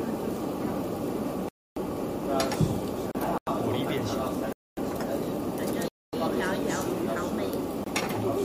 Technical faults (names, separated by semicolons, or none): block of digital silence; gap at a join of encoded pieces